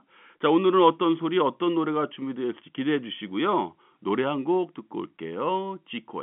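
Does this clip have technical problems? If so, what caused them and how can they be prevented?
No, the speech sits in the ordinary G.711 telephone band, roughly 150 Hz to 3.5 kHz with nothing above 3.8 kHz, consistent with 64 kbps mu-law coding, so there is nothing to correct or prevent.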